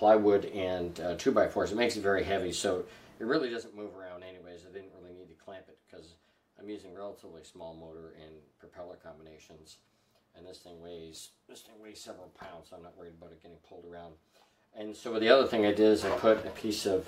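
Nothing stood out as a technical fault on listening.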